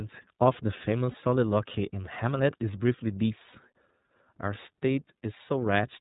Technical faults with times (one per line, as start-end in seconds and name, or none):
0.00-6.01 iLBC codec
1.11-1.15 lost iLBC frames
3.51-3.55 lost iLBC frames